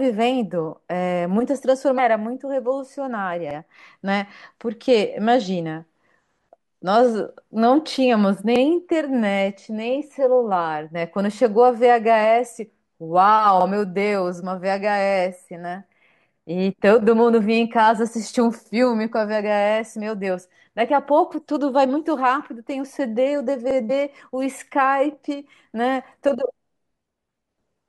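Damaged data in a compressed stream appears first, from 1.98 to 2.00 s in this speech. Corrupted bytes in the encoded file make the decoder misread a frame, lose sync and hunt for the next valid frame header. The result is a brief glitch lasting about 20 ms.

Overlapping chunks follow at 3.51, 8.56, 13.61, 18.66 and 23.71 s, a steady rhythm of one every 5 s. The audio was handled in 5 s chunks, and each new chunk started 50 ms before the previous one ended, so that slice of speech plays twice at every join. Each repeat is heard as a short click-like stutter, and its perfectly regular spacing marks it as a processing fault.

Damaged data in a compressed stream returns from 23.89 to 23.91 s, just after the last chunk join. Again the decoder stumbles on corrupted frame data and resynchronises, giving another sudden glitch of about 20 ms. Coming so soon after the stutter at 23.71 s, the two faults are heard almost back to back.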